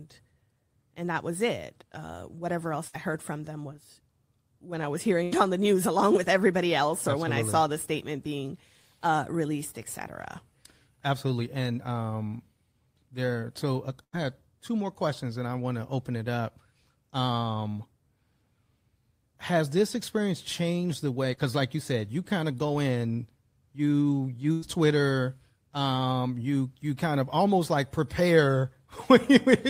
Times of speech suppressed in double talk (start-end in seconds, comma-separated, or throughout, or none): none